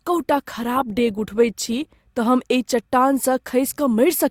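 Speech sounds dull or artificial in the treble and smeared until 2.0 s, then abruptly clears without a gap: an adaptive stream starting at a low bitrate, which fits Opus at 32 then 64 kbit/s.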